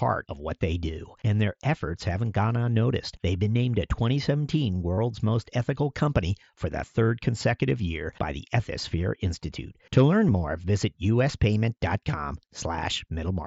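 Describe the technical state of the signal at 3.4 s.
At 3.4 s the speech is intact, with no fault at that moment beyond the light character of the wideband Bluetooth mSBC headset path it passes through.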